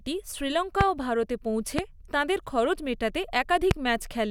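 Three loud pops cut through the speech, at 0.81–0.83 s, 1.79–1.81 s and 3.71–3.73 s, each a single sharp thump roughly 20 dB above the voice, which carries on underneath. They are likely voltage spikes such as switching transients. Each shows as a tall spike on the waveform and a thin full-height vertical line on the spectrogram.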